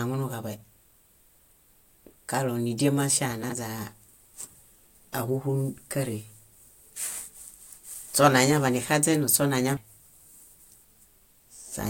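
Chunks out of order first appear at 3.44 to 3.52 s: one 21.33 ms chunk was delivered three chunks late, so it plays after material that should follow it. Nothing goes missing, but the reshuffle makes a brief jumbled flutter. The same fault recurs at 7.94 to 7.98 s, where a single chunk lands one position late, giving a shorter stutter.

Damaged data in a compressed stream strikes at 9.77 s. Corrupted bytes make the decoder misread the frames there and lose sync until it finds the next valid frame header. The result is a short glitch.

At 10.48 to 10.52 s, chunks out of order return as another one-chunk swap, heard as a quick stumble.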